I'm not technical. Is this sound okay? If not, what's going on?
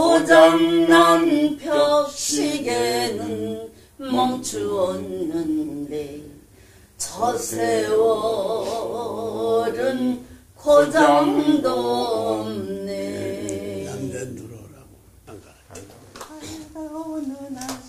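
Yes, nothing wrong here.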